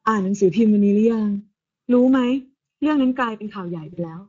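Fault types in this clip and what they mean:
Channel delay (comb filtering): The speech sounds hollow and phasey, with a thin, boxy colour that never changes. One channel arrives a fraction of a millisecond after the other, and when the two are summed to mono the shared signal cancels at evenly spaced frequencies. Here the first notch sits at roughly 700 Hz, with more notches at regular intervals above it, carving a fixed comb pattern through the whole clip.
Speex codec: The voice is plainly hoarse and grainy throughout, with a rough, slightly buzzy edge and upper frequencies that sound hissy rather than detailed. This is the Speex speech codec, which models the voice with a filter and a coded excitation. The damage points to a middle-quality setting. The excitation is coded coarsely, so the voicing turns rough, and the top band is filled with shaped noise instead of real high-frequency content.
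VoIP packet loss concealed by the speech codec: From 3.93 to 4.13 s the voice smears into a buzzy, droning tone that fades, then stays weak and distorted before recovering. About 40 ms of audio went missing, which fits two lost frames. The decoder filled the gap by repeating its last pitch and filter with falling gain. Each frame builds on the previous one, so the distortion continues after the real audio returns, stretching the disturbance to about 200 ms.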